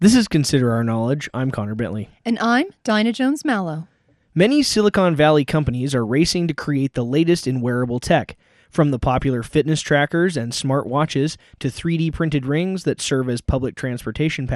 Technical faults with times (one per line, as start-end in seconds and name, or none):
0.00-14.55 MP2 compression